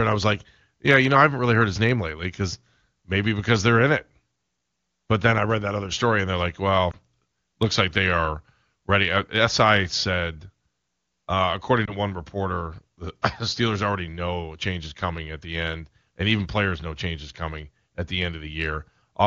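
Lost AMR speech frames at 6.91 to 6.97 s and 11.86 to 11.96 s: each sounds like a single dropped 20 ms frame, where the wideband decoder repeats its last good pitch and vocal tract settings at reduced gain, giving a brief dip or warble in the speech.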